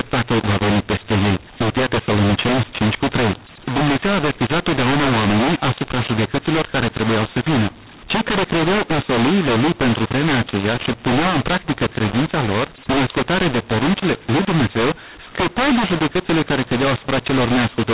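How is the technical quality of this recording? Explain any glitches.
The technical quality is poor throughout, because the whole recording has a decoding fault. From start to finish the speech sounds harsh and gritty, with some sounds coming out too loud and others too quiet. The gaps between phrases are not silent but filled with noise. Behind this is a case of mu-law and A-law mixed up. The audio was written with mu-law G.711 coding but read back as A-law. Each 8-bit code maps to a different level under the two logarithmic laws, so the whole scale is scrambled: some samples swell, others shrink, and codes meant for near-silence land well above zero, which is the noise in the pauses. The narrow telephone band, with nothing above 4 kHz, comes from the 8,000-samples-per-second G.711 coding itself.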